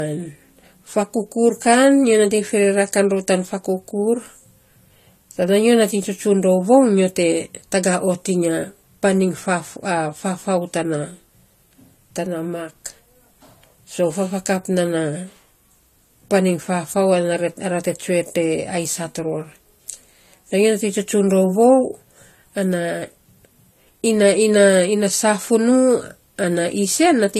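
From the first second to the last, the speech has a dulled quality, with nothing above 14.1 kHz and two different flavours of compression artefact layered on top of each other. That mix is the signature of transcoding between lossy codecs, most likely a Vorbis encode re-encoded to AAC-LC, both at around 48 kbit/s. The second encoder wastes bits reproducing the first one's artefacts and then adds its own on top.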